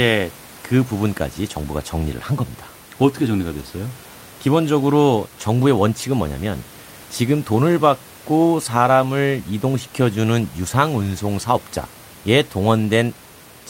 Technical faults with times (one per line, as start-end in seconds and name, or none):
none